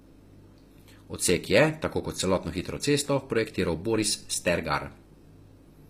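From start to end, the speech has a synthetic, gritty top end, with s sounds turning metallic and nothing above 15.5 kHz. The cause is likely HE-AAC compression, which rebuilds the treble by copying lower bands upward, consistent with a low bitrate near 24 kbps.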